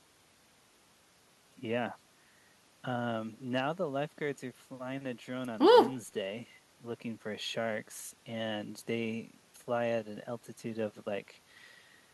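No technical faults can be heard anywhere here.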